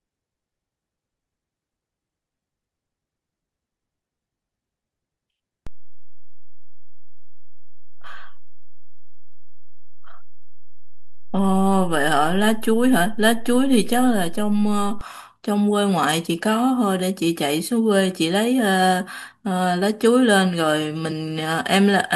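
At 5.67 s a DC step shifts the waveform's zero line, holding until 15.01 s when it steps back. Each transition produces a low thump while the speech continues unchanged. Unlike a dropout or clipping, no sound is lost or distorted between the two thumps.

At 21.1 s compressed frames are skipped. About one frame, roughly 20 ms of audio, is never decoded, so the speech jumps ahead. There is no silent gap.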